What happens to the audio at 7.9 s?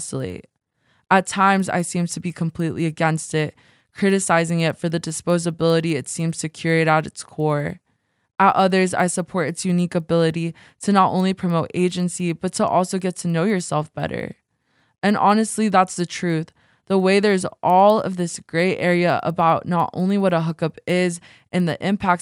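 At 7.9 s there is a steady ticking under the speech, ten times a second, which stops in the pauses. It runs through the whole clip, not just this moment. This is a resampler restarted on every block: each 100 ms block was converted on its own, which fits a 24 kHz to 48 kHz conversion. At each block edge the converter lacked the neighbouring samples, so every boundary carries a small error that sounds as a tick.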